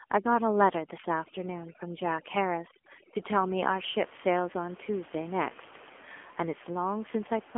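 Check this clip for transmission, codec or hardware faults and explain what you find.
Two faults are audible in this speech clip: heavy-handed noise removal over the opening seconds and a narrowband mobile codec across the whole clip.

From 0.0 to 3.65 s, overdone noise removal gates individual frequency bands that sit near the noise estimate. Room noise, about 23 dB below the speech, collapses to near silence with twinkling specks. Unlike codec warble, this stops at 3.65 s.

Throughout, the AMR narrowband mobile codec leaves a 250 to 3400 Hz telephone band with nothing above 3.5 kHz. Its pulse-driven vocal-tract model makes the voice buzzy and synthetic, which points to a low mode around 7.4 kbps. Plain band-limiting would sound muffled but not buzzy.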